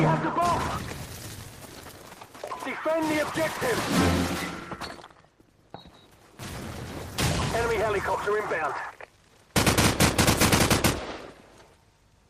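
No technical faults are audible.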